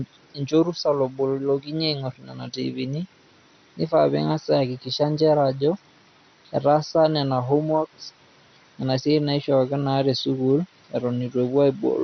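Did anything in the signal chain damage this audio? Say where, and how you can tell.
Yes, at the codec: throughout, the speech stops near 6.1 kHz and gurgles as sub-bands flicker, unlike a clean low-pass, so it is likely MP2 compression.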